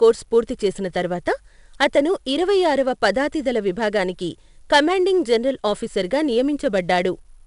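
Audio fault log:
Throughout: 4-bit ADPCM compression. Coarse predicted steps leave gritty hiss tracking loud speech and rough attacks. Nothing above 10.6 kHz, consistent with an 88 kbps stream.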